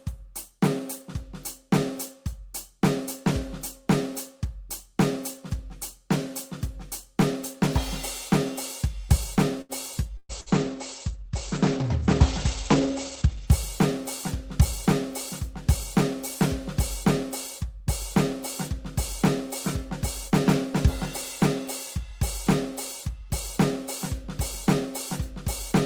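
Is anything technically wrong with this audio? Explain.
Yes, this music clip has three faults.

From 9.61 to 10.49 s there is repeated packet loss, heard as a robotic sound. Three gaps, the longest 117 ms, were patched by extending the preceding sound, covering about 28% of that span. The result is choppy. The waveform shows smeared, repetitive stretches, and the spectrogram shows blurred harmonics.

From 10.21 to 13.59 s there is a call bitrate drop. The encoder's rate fell from 32 to 13 kbps, so it coded more coarsely and cut the bandwidth from 20 kHz to 8 kHz. The music turns muffled and watery, and the spectrogram goes empty above 8 kHz.

From 22.05 to 25.32 s there is a jitter buffer speed-up. To shrink an overfull buffer, the receiver repeatedly cut out pitch-period-sized slivers, around 40 ms in all, so playback ran at 101% speed with unchanged pitch. The music loses its steady tempo. 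The spectrogram's note onsets sit a little closer together, without visible gaps.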